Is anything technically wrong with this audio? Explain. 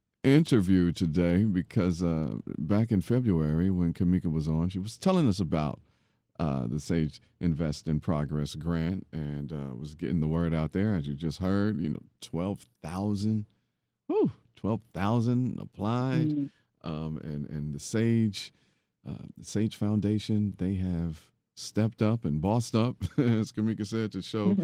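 No, nothing in this speech recording is technically wrong.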